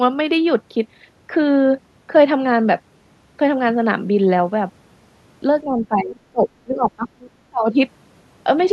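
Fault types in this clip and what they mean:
Speech suppressed in double talk: the speech drops by up to about 30 dB in three stretches from 5.6 to 7.8 s, likely echo-canceller ducking during overlapping talk.
Other side's voice leaking through: a brief, faint second voice near 7.2 s, about 25 dB below the speech, likely residual loudspeaker echo the canceller missed.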